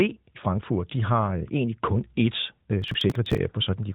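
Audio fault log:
2.02–2.59 s, drift correction step: just after "har øh egentlig kun", playback slows by 6.2% and pitch falls 110 cents, about a semitone, then snaps back. This is likely a clock-matching rate jump made to refill a buffer, moving speed and pitch together.
2.82–3.38 s, processor overload crackle: a gritty run of tiny hard-edged skips tears through the sound, carried within the narrowband AMR-NB channel's band below 3.8 kHz. The spacing suggests buffers of a few milliseconds, around thirty in a row, missing their deadlines and being dropped.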